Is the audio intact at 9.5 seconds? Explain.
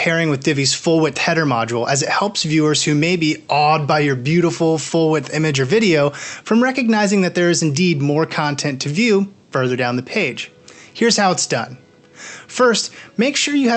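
Yes, the audio is intact at 9.5 seconds, with nothing dropped, clipped or distorted there beyond the ordinary coding character of the call path it passed through.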